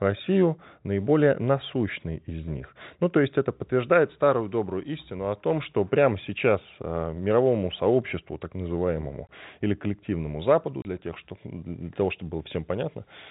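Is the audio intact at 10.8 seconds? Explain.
No. At 10.82 s the speech drops out for 30 ms, until 10.85 s. This is packet loss filled with silence. Some packets never arrived, and the receiver played silence in their place. The gap's length fits three lost 10 ms packets. The sound stops dead and restarts abruptly. Around the hole, the narrow telephone band of the G.711 coding is still heard.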